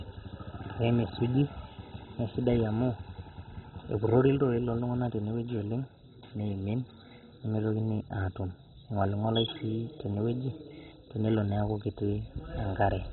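All the way through, the speech sounds dull and gurgly, with nothing above 4 kHz and a granular roughness. That's likely heavy MP2 compression, pointing to a starved rate around 16 kbps, with upper sub-bands switched off and the rest coarsely quantised.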